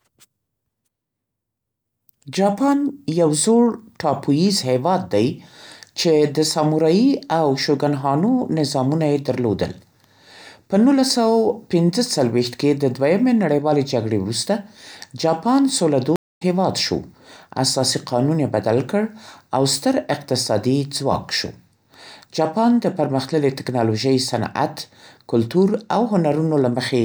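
At 16.16 s a stream reconnect drops the speech into 223 ms of silence, then a fresh decoder resumes roughly 150 ms later in the stream, skipping material.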